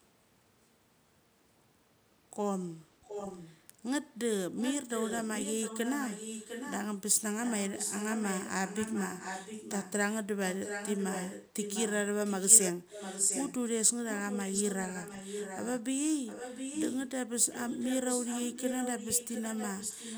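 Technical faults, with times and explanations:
3.03–3.61, 4.57–6.75, 7.42–9.92, 10.41–11.93, 12.25–13.54, 14.1–15.81, 16.26–17.09 and 17.51–20.18 s, echo leak: a second copy of the speech trails the original by a steady 703 ms, roughly 10 dB down at first, around 5 dB down from 10.41 s, and about as loud as the direct speech at 12.25–13.54 s. The fixed delay points to a far-end loudspeaker feeding its microphone, likely with an echo canceller that failed to cancel it.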